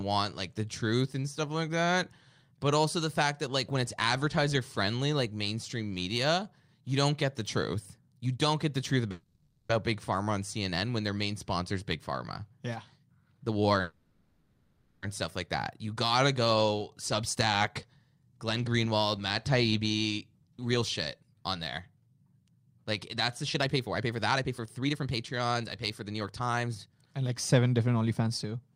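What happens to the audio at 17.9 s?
At 17.9 s the speech is inside a jitter buffer speed-up running from 17.15 to 21.42 s, between "gotta go" and "on there". The receiver drains excess buffered audio by snipping out pieces of one or a few pitch periods repeatedly, playing about 7% fast and shedding roughly 0.3 s. It sounds hurried at unchanged pitch. On a spectrogram the harmonics keep their spacing while syllables shorten, and the waveform shows tiny splice seams between periods.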